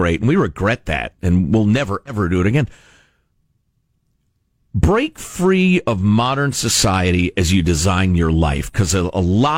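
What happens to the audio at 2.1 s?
Between 2.05 and 2.13 s, compressed frames are skipped: a couple of 20 ms frames are lost and the speech jumps ahead by about 40 ms. Unlike a dropout, no silent gap appears.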